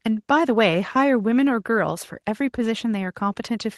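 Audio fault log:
No fault can be heard in this speech clip.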